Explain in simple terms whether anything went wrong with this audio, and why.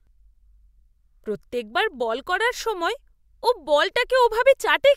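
Nothing went wrong with this recording of speech. No moment in it reveals a technical problem with the sound itself.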